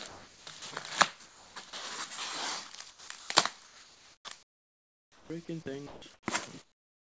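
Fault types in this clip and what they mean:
Sound chopped by the voice detector: The audio turns choppy in five stretches, at 0.08–0.62, 1.25–1.73, 2.75–3.29, 3.65–5.30 and 5.63–6.26 s. Parts of each stretch give way to a flat synthetic hiss, about 0.3 to 0.4 s at a time and nearly 1.5 s in the longest. The sender's voice detector likely switched transmission on and off repeatedly. The receiver filled each gap with comfort noise.
Comfort noise in place of the background: From 6.62 s to the end, the real background is replaced by a steady, featureless noise about 17 dB quieter, lasting the final 0.39 s. The sender likely stopped transmitting because its detector heard nothing it treated as active sound. The receiver then generated noise only loosely shaped like the background and without its detail, heard through the G.722 call path with nothing above 8 kHz.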